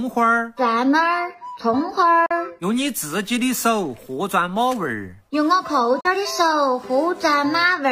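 At 2.26 to 2.31 s and again at 6.00 to 6.05 s, the sound cuts to silence for about 50 ms, then returns as though it had played on through the gap. This is a Bluetooth dropout, likely from roughly two packets arriving too late and being discarded.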